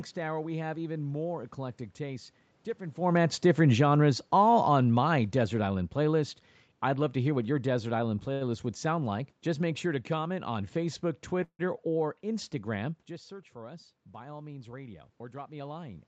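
From 3.0 s, just after "more eclectic tastes different", the talker comes closer and automatic gain falling sets in. The control judges the input too loud and lowers its gain by about 8 dB until 8.2 s, so the voice and room noise sink together. On a waveform the envelope tapers steadily, and a spectrogram darkens evenly across the band, which tops out near 8 kHz.

At 8.33 to 8.5 s, right before "would sound like", there is a short stall from a late packet. The jitter buffer ran dry and the receiver stretched the last sound for 73 ms until the packet came. Nothing is lost, but a syllable hangs with a faint buzz, visible as a smeared, repeated spectral slice.

From 11.44 to 11.61 s the audio freezes. A decaying buzz of about 155 ms includes roughly 80 ms of near-silence, then the sound resumes where it stopped. This was likely a call audio freeze caused by delayed packets, and it appears as a tapering smear and then a blank gap in the spectrogram.

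Around 13 s the talker moves back and the input drops by about 14 dB. From 13.08 s to the end, automatic gain rising slowly lifts voice and background together. The waveform envelope swells gradually, and the noise floor in the spectrogram brightens along with the voice.

From 14.73 to 15.83 s a jitter buffer speed-up shortens the backlog. The receiver snips pitch-period-length pieces, about 150 ms in total, so the speech runs at about 112% speed at unchanged pitch and sounds hurried. Syllables appear compressed in time while the harmonic spacing stays the same.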